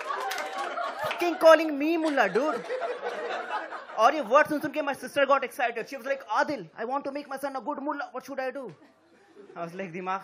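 At 1.08 to 1.10 s, damaged data in the compressed stream makes the decoder misread frames and lose sync, producing a brief glitch.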